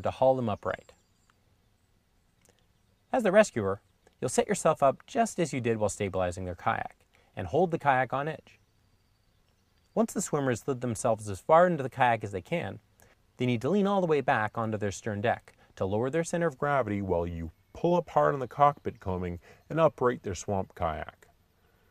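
A section at the wrong speed runs from 16.5 s to the end, likely from a clock mismatch, playing at 0.893 times speed, slower and about two semitones lower.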